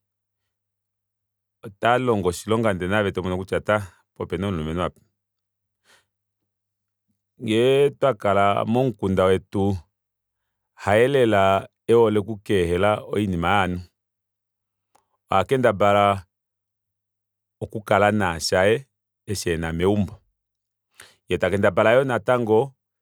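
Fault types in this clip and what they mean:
No technical faults can be heard in this speech recording. Nothing in the audio calls for a fault entry here.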